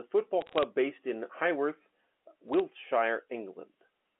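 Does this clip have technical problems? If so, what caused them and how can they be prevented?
Yes. Bit errors on a digital phone line cause crackle from 0.41 to 0.63 s, just before "based in", and again from 2.53 to 2.60 s. Each flipped bit, roughly 0.2% and 0.15% of them, corrupts one logarithmic sample, and sign or high-bit hits give sharp ticks over the speech, which stays band-limited to 250 Hz–3.5 kHz as G.711 A-law telephone coding sounds. Prevention: use error-checked transmission or cleaner line equipment so corrupted bits are caught before decoding.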